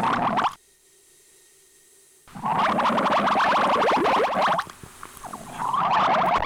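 At 4.26 s the sound drops abruptly by about 6 dB and recovers at 4.35 s. This brief dip is a case of one channel dropping out. One stereo channel likely went silent, so the mono sum lost half of everything common to both sides.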